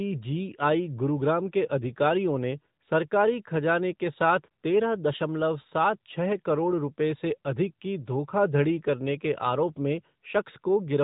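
From start to finish the speech carries AMR narrowband mobile codec damage: nothing passes above about 3.8 kHz, and the plainly audible synthetic, buzzy edge of the vocal-tract model rebuilding each frame from a few pulses points to a mid-rate mode around 10.2 kbps.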